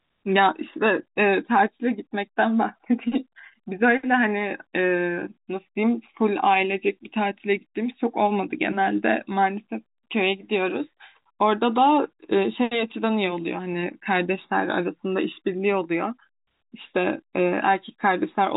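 Nothing stood out on listening to the speech, which comes through the narrow band of G.711 telephone coding with nothing above 3.8 kHz.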